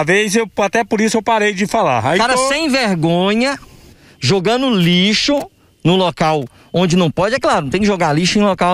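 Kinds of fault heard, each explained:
No kinds of fault are heard in this clip.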